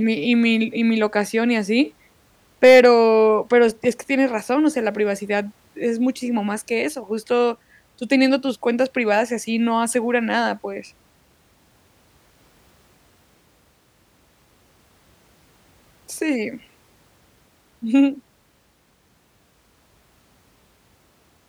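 Hard clipping at 2.64 to 2.86 s: the speech overdrives a stage by about 4 dB, flattening peaks and adding high harmonics heard as crackle.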